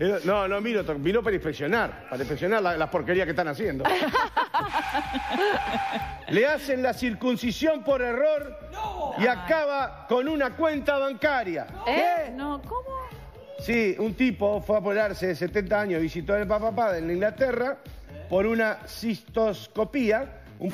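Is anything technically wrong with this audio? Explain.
Yes, there's one fault. At about 13.74 s there's a block of digital silence: a tiny run of samples, roughly 1.33 ms, which fits a 64-sample block, dropped straight to silence, likely because the output buffer wasn't filled in time. The abrupt cut and return make a single sharp tick.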